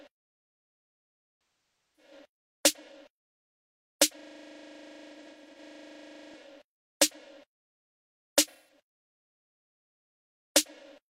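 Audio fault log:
1.83–2.12 s: AAC frame loss with concealment. A smeared, noisy patch where the decoder rebuilt the missing stretch from the last good spectrum, which points to roughly a dozen lost frames.
4.19–6.34 s: system hang loop. A 40 ms slice of audio repeats about fifty times, giving a rigid 25 Hz stutter while the system froze and the hardware kept replaying its ring buffer.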